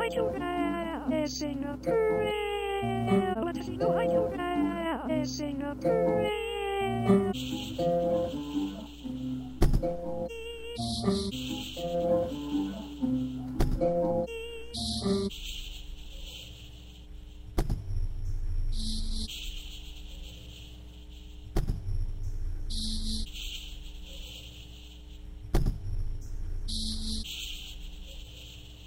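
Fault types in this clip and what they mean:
Mains hum: a steady low tone at 60 Hz runs through the whole clip, sitting fairly prominently beneath the sound rather than buried far below it. It comes from the power line leaking into the signal path, typically through a ground loop between connected equipment or the magnetic field of a nearby transformer. The 60 Hz fundamental and its low harmonics stay constant in pitch and level regardless of what the audio is doing.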